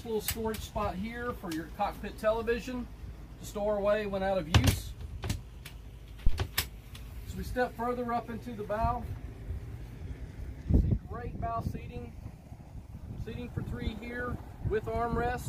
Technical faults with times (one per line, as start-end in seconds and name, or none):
6.27-6.37 phantom power thump